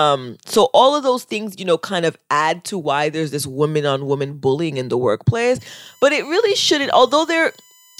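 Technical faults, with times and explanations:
5.59–7.99 s, USB whine: just after "bullying in the workplace", current drawn by the USB bus in its 1 ms frames starts leaking into the audio path through the power or ground. It is a fixed-pitch tone built on 1 kHz, with its strongest component at the seventh multiple, 7 kHz, so it lands as a thin, high whistle sitting faintly, roughly 35 dB under the speech, and it runs to the end of the clip.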